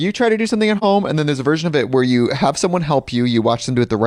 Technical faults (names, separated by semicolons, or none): AAC frame loss with muting